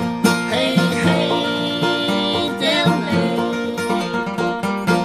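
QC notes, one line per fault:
1.48 s and 3.69 s: dropped samples. Each is a single sharp click with a thin vertical line in the spectrum, likely from a tiny run of missing samples, a fraction of a millisecond, making the waveform jump. Unlike a dropout, no sound is lost and no silence is heard.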